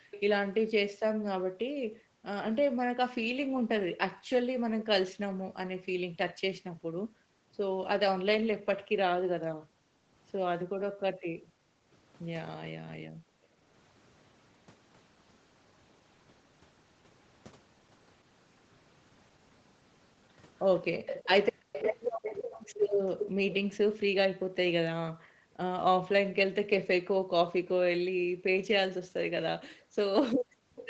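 Speech over a call, where the room background keeps sinking out of hearing and coming back, dropping by as much as about 40 dB. It happens briefly at 0.0 to 0.11 s, then through most of 1.08 to 11.9 s, again at 12.96 to 13.63 s, and over much of 23.64 to 30.76 s. This is background gated by the echo canceller: while the far-end loudspeaker was playing, the canceller pulled the microphone down hard, cutting the ambience along with it until it released. A faint delayed double of the speech also trails the live sound, lagging by 342 ms and sitting roughly 10 to 20 dB below it. It appears as short scraps at 0.11 to 0.21 s and 30.76 to 30.87 s, and as a longer stretch from 20.63 to 23.54 s. That delayed copy is likely an echo leak, where sound from the loudspeaker reached the microphone, got past the echo canceller, and was sent back down the line. The speech is band-limited to 8 kHz throughout, as expected from an Opus call path.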